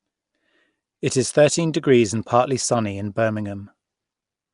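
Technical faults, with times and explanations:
Throughout, Nellymoser compression: the speech has a rough, hissy halo and a smeared, underwater quality, with nothing above 10.6 kHz. This is likely Flash's Nellymoser Asao codec, whose fixed bit budget, consistent with roughly 44 kbps, leaves weak bands empty and then refills them with noise.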